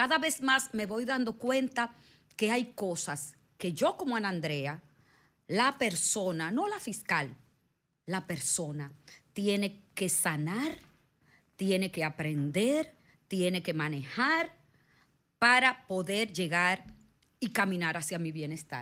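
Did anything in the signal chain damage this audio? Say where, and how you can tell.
No, no stage in the signal chain leaves any audible damage on this speech recording. Nowhere in it does capture, conversion, transmission or playback audibly intervene.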